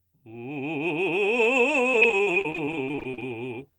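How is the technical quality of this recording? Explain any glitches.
The music is marred by one stretch of repeated packet loss (robotic sound), from 1.91 to 3.22 s. Short holes arrive one after another, the longest about 38 ms. Each is patched by stretching the last sound, covering about 31% of the span. The result is choppy, with pieces missing.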